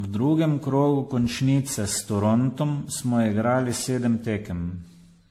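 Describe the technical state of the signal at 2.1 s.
At 2.1 s the speech is smeared, swirly and hollow with blurred onsets, likely generation loss from repeated AAC-style re-encoding. A spectrogram shows patchy holes and nothing above 16.6 kHz throughout.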